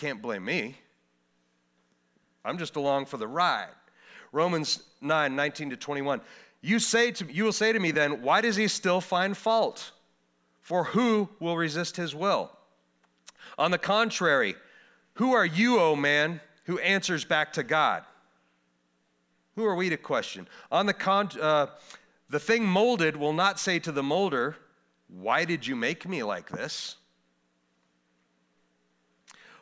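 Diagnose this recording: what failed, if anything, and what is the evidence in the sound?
Nothing failed: no stage in the chain leaves any audible evidence anywhere in the speech.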